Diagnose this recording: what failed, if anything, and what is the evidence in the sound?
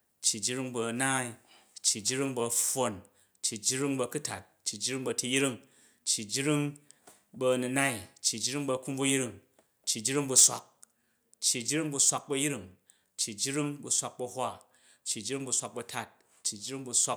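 A harsh, crackling edge lands on the loudest sound from 10.36 to 10.47 s, with peaks driven about 11 dB past full scale and roughly a tenth of the samples flattened. A shorter, milder crackle follows at 12.08 to 12.10 s, about 4 dB over, with only a few percent clipped. This is microphone overload at the converter stage, likely from an input gain set too high, so the waveform tops are sheared off at the converter's ceiling.

At 10.4 s, in the middle of that first distorted burst, the speech and its background drop together by about 2 dB in a single step and stay at the lower level. That pattern points to a microphone volume stepped down by the call processing, likely because automatic gain control detected clipping and cut the device input level. The reduction wasn't enough to stop the second overload at 12.08 s.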